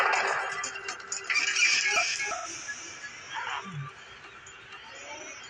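From 1.27 s to 3.65 s a second copy of the audio runs about 400 ms behind and about 5 dB quieter, starting and stopping abruptly: a doubled audio track, likely from a second capture path or an out-of-step edit. Between 2.36 s and 2.46 s an 85 ms smeared, noisy patch shows AAC frame loss with concealment, consistent with two lost frames refilled from the last good spectrum.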